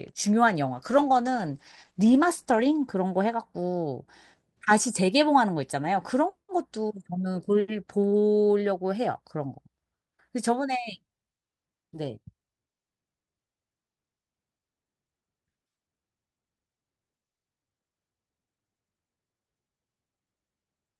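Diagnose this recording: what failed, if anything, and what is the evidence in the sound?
What failed is a call bitrate drop at the network-to-codec stage. From 0.77 to 2.97 s the speech goes rough and muffled, with the top end missing, which fits the encoder falling from 40 to 13 kbps for about two seconds after the bandwidth estimate fell, then recovering.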